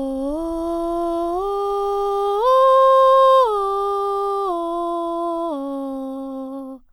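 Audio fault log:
Nothing stood out on listening to this music.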